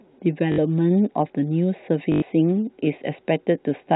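Speech over a telephone-band G.711 path, hit by packet loss with the last packet repeated at 0.52–0.58 s and 2.12–2.22 s. The receiver replays stale audio, giving a buzzing robotic stutter, about 60 ms then 100 ms, which fits 20 ms packets.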